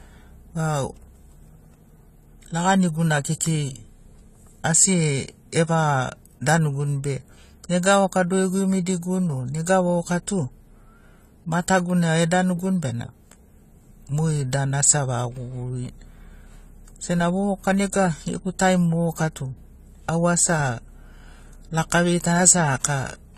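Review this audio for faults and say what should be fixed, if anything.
Throughout the speech, nothing sounds above 14.1 kHz and the sound is dull and smeared, with a warbling, fizzy texture on sustained sounds and sibilants. That points to AAC compression, likely AAC-LC at around 32 kbps, quantising away detail; unlike a plain low-pass filter, it adds those artefacts. Prevent it by exporting at a higher bitrate or to a lossless format.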